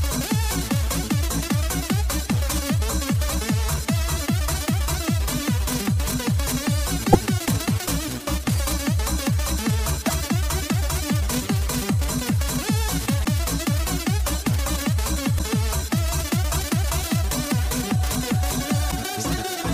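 Five brief glitches break the audio at 7.12–7.15 s, 10.07–10.10 s, 13.23–13.26 s, 15.37–15.41 s and 18.90–18.93 s. Each lasts about 30 ms, roughly one 26 ms MP3 frame. The sound skips ahead and garbles for that instant. The likely cause is a broken MP3 bit reservoir: after lost frames, the decoder reads the wrong bytes. On a spectrogram each shows as a narrow vertical smear, and the waveform shows a short discontinuity.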